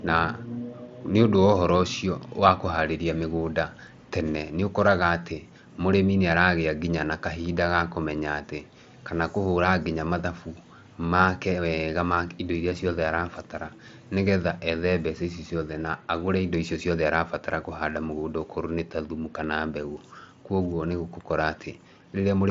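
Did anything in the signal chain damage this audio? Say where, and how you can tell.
No, nothing in the signal chain damaged this audio; it passes through the Bluetooth mSBC headset path as expected.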